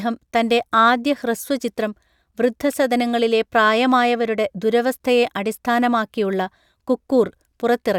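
No technical faults are audible.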